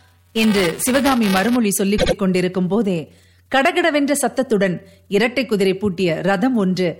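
From the start to 1.56 s, buffer tearing puts a steady 345 Hz buzz on the speech, matching a 128-sample buffer. A small slice of each buffer carries audio roughly a hundredth of a second old, so unlike a dropout the buzz stays locked in pitch and follows the signal.

At 1.97 to 2.14 s, repeated frames make a 78.4 ms block play two extra times. The result is a stutter that adds about 0.16 s, which fits a run of three frames. Unlike tearing, it happens once rather than as a continuous rattle.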